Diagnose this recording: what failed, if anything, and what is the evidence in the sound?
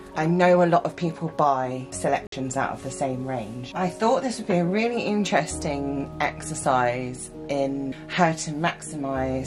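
Likely a Bluetooth dropout at playback: packets missed the headphones, so from 2.27 to 2.33 s the sound goes silent, then resumes further along.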